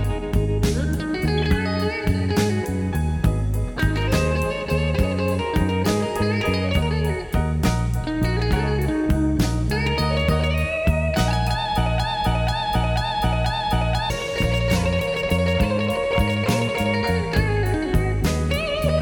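From 12.00 to 14.10 s, a broken-record loop repeats one 0.49 s fragment four times back to back, replacing the sound that belonged there. A player or stream likely stalled and kept resending its last buffer. Unlike a brief stutter, the repetition is exact and sustained.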